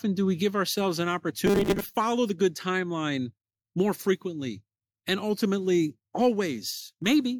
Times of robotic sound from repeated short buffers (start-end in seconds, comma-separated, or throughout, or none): 1.46-1.97